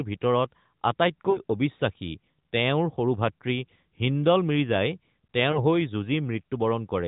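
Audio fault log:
1.30–1.38 s and 5.52–5.65 s: lost AMR speech frames. Damaged frames were dropped and the AMR-NB decoder, running at 12.2 kbps, filled them by repeating the last good pitch and vocal tract settings at falling gain. The first gap, before "অবিশ্বাসী তেওঁৰ সৰু ভাতৃ", sounds like about 40 ms, or two frames. The second sounds like about 20 ms, or one frame. Each is heard as a brief smeared dip.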